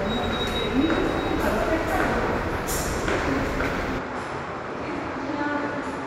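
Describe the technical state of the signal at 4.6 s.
At 4.6 s the sound sits inside an input switched to a poorer device, from 3.98 s to the end. The likely cause is a change to a narrower input. Nothing passes above 11.4 kHz. Level drops about 5 dB, with faint new noise underneath. No gap marks the switch.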